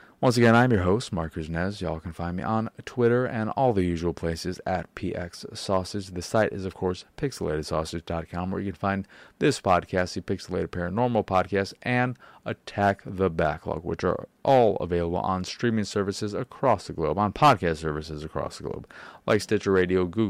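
No technical faults can be heard anywhere in the recording. Nothing in the signal calls for comment at any point in the speech.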